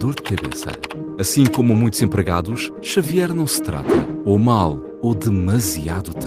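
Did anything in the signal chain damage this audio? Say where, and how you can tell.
No, nothing in the signal chain damaged this audio.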